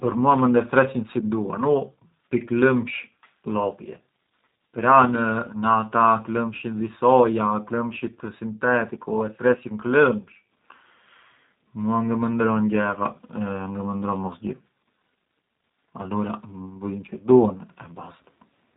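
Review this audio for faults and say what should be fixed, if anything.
G.729 codec damage runs throughout: the speech is rebuilt from a filter, pitch predictor and sparse pulses, sounding rough and synthetic, consistent with 8 kbit/s, with nothing above 3.8 kHz. Prevent this by carrying the call on a wideband codec such as G.722 or Opus instead of G.729.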